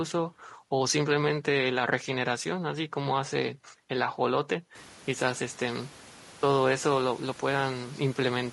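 From start to finish the speech sounds rough and grainy, with noise filling the gaps between harmonics and a thin, synthetic-sounding top band. This is likely low-delay AAC compression: its short frames resolve pitch poorly, and the damage fits a low bitrate near 32 kbps. The room noise that rises about 22 dB near 5 s belongs to the recording and is not part of this fault.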